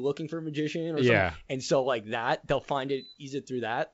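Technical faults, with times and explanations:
Listening closely to this speech over its G.722 wideband telephone path, nothing stood out as a technical fault.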